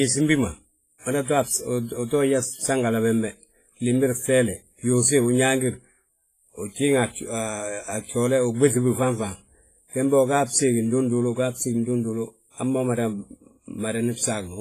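Throughout, the speech has likely been through heavy WMA compression at a rate that fits about 24 kbps. Long transform blocks smear quantisation noise across tens of milliseconds and zero weak lines. The result rings and washes, with hiss that breathes with the signal and nothing above 15.2 kHz.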